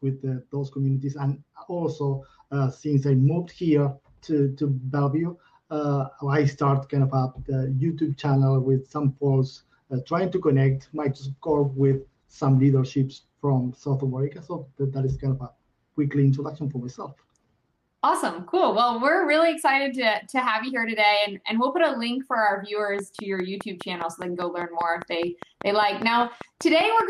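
From 10.76 s to 13.31 s the audio turns rough and muffled, with highs lost above 8 kHz for about 2.1 s. This is a call bitrate drop, consistent with the encoder falling to around 16 kbps.

From 22.99 s to the end, a regular ticking at about 5 clicks per second sits roughly 10 dB above the sound. This train of clicks is likely interference from nearby equipment or a faulty connection or power supply.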